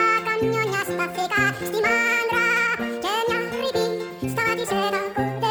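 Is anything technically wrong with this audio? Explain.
Yes. Throughout the clip, the audio is read two samples at a time, giving double speed. Each pair of samples is treated as one frame, as if the data held two channels or wider samples. Everything plays twice as fast and a full octave higher.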